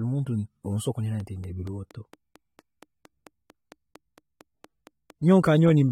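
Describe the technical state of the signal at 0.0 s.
At 0.0 s the speech already shows likely AAC compression, present throughout: nothing above 16.6 kHz, with dull, smeared, warbly coarse quantisation that fits a low bitrate around 32 kbps.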